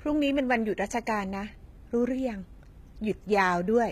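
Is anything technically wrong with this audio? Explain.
Yes. Throughout the speech there is plainly audible HE-AAC compression damage, likely from encoding at a very low bitrate, which fits roughly 20 kbps. Nothing is present above 14.9 kHz. Only the lower spectrum is properly coded, and the treble is rebuilt by spectral band replication, which copies lower bands upward under a coarse envelope. The top reaches higher than plain AAC would, but its harmonics don't line up with those below, so sibilants sound gritty, metallic or lispy.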